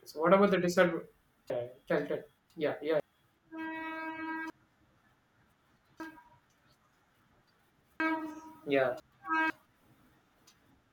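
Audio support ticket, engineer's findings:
Chunks out of order at 1.5–3.0 s (after "about the disadvantage"), 4.5–6.5 s and 8.0–9.5 s. A 500 ms block plays two to three slots late, so the speech jumbles. Probably buffer reordering.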